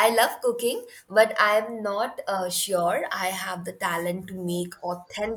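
No dropouts, clicks, distortion or timing errors occur anywhere in the speech.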